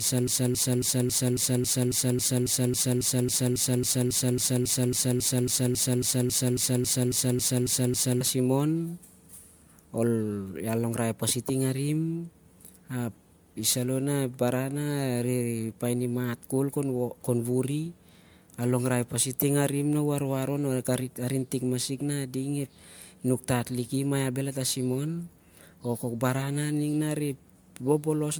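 From the very start until 8.21 s, a broken-record loop is already under way: a 0.27 s fragment repeats exactly, back to back, likely from a stalled player or stream resending its last buffer. Unlike a stutter or glitch, the identical fragment recurs steadily, and the speech meant for those seconds is lost.

Throughout the speech there is generation loss, likely from MP3 encoding repeated about seven times at around 140 kbit/s. The result is swirly, hollow and smeared, with blurred attacks. Because the band still reaches 20.1 kHz, this degradation is not the dull, band-limited sound of a single low-bitrate encode.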